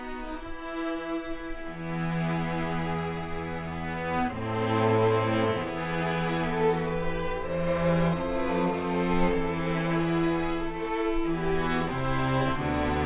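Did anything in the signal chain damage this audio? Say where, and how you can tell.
No, nothing I can hear points to damage at any stage of the signal chain.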